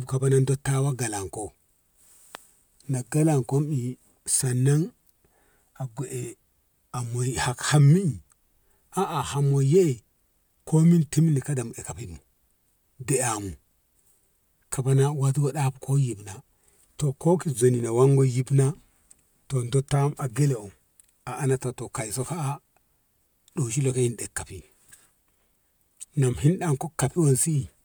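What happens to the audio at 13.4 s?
Nothing goes wrong at 13.4 s; the speech there plays through intact, with no dropout, click, distortion or other fault.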